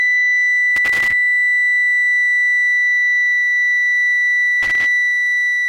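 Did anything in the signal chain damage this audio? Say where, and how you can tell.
Yes, loose connector crackle in the analogue wiring. Irregular crackle bursts at 0.76–1.12 s and 4.63–4.86 s show a worn contact chopping the music.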